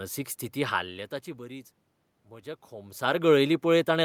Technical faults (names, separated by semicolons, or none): automatic gain falling